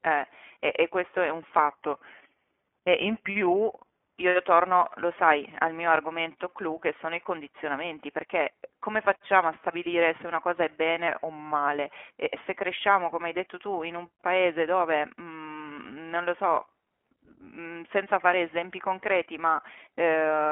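The whole recording has passed through the iLBC codec, a narrowband VoIP coder that rebuilds each short frame's excitation on its own, with no carry-over from the frame before. The speech is confined to a telephone band of roughly 250 Hz to 3.4 kHz, with nothing above 3.7 kHz, so it sounds boxed-in and dull. The coding damage is plainly audible as a rough, slightly synthetic grain, consistent with the 15.2 kbps mode and its 20 ms frames.

From 1.70 s to 4.16 s, the playback rate drops in a single step, likely a drift correction step in which clock-matching software slowed output to refill its buffer. Speed falls by about 5.9 % and pitch by 105 cents, about a semitone, together. The speech suddenly sounds detuned, lower and slightly dragged, for about two and a half seconds, then snaps back to its normal pitch and pace at 4.16 s.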